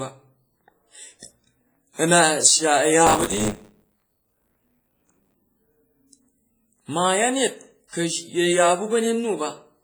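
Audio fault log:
throughout, WMA compression: heavy codec damage leaves ringing, washy smearing and hiss that swells with the speech, likely from a low-bitrate WMA encode around 24 kbps.
3.06 to 5.34 s, buffer tearing: a robotic 100 Hz buzz while speech plays, as roughly a fifth of each buffer repeats audio from about 20 ms earlier with hard joins.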